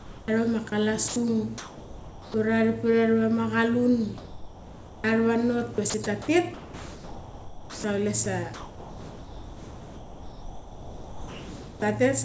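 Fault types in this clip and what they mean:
Sound dropped by the voice detector: The sender's detector likely mistook quiet speech for background and stopped sending, so comfort noise fills the gaps, from a brief 20 ms blink to about 3.3 s. On the waveform, speech gives way to a flat, low band; on the spectrogram, the harmonics vanish into smooth, even noise.
Sound chopped by the voice detector: Between 5.74 and 6.28 s, the detector likely toggled on and off more than once, cutting out about 160 ms in short pieces, so bits of the speech drop. The waveform shows notched speech bursts, and the spectrogram shows harmonics interrupted by brief patches of uniform noise.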